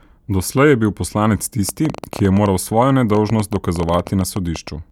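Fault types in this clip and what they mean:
Train of clicks: starting at 1.69 s, just after "je bil poslanec", and running to 4.69 s, a series of similar sharp pulses ticks over the speech at about 9.4 per second on an uneven pace, around thirty in all, peaking roughly 5 dB above the speech and audible in pauses too. Its sustained, repetitive train of same-shaped clicks sets it apart from a single isolated click or random crackle. Likely cause is nearby interference or a faulty connection or power supply.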